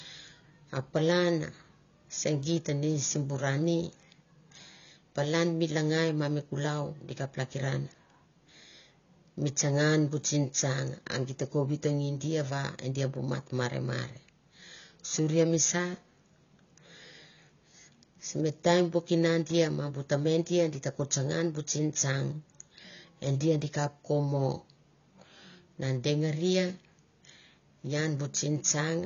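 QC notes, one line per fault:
Throughout: AAC compression. The speech sounds dull and smeared, with plainly audible codec damage. Nothing is present above 6.9 kHz, so sibilants and consonant edges lose their crispness. The likely cause is AAC-LC coding at a low bitrate, and the damage fits roughly 24 kbps. At that rate the encoder has too few bits for the upper band. It drops everything above the cut-off and quantises the remaining spectrum coarsely, which blurs detail across the whole clip.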